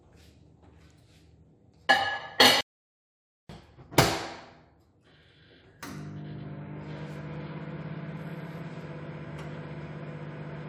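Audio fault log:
2.61–3.49 s: audio dropout to silence. The sound stops abruptly mid-flow and returns just as suddenly after about 0.89 s, with the gap holding silence, no room tone or noise floor at all. This is likely an input that briefly lost its signal while the recorder kept writing zeros. On the waveform it shows as a flat line between two hard edges; on a spectrogram, a dark vertical band across every frequency.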